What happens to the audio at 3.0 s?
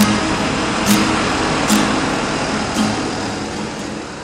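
Nothing goes wrong at 3.0 s: the audio there is intact, with no dropout, click, distortion or other fault.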